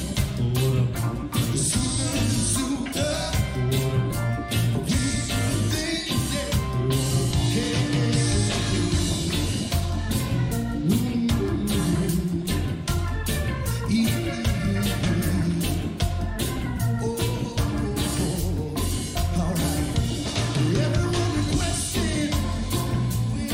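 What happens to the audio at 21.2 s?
Nothing goes wrong at 21.2 s; the audio is intact at that moment.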